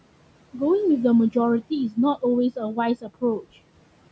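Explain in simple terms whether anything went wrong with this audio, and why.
Noise suppressor artifacts run through the whole clip: the filter keeps ducking the room noise between words, so the background sinks and swells.

Speech cut by the noise suppressor comes at 3.01 to 3.23 seconds: the filter mistook some speech for noise, so part sounds swallowed.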